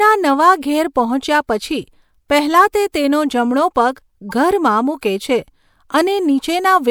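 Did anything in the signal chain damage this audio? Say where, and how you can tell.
Yes, at the codec: a corrupt frame decoded at 2.54 s before "તે તેનો" and 4.29–4.33 s before "ઘરમાં મૂકે છે". Misread bits put energy at the wrong frequencies for about two frames, rather than the silence of a dropout.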